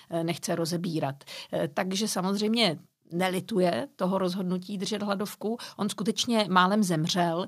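Listening to the recording, nothing technical stood out at any point.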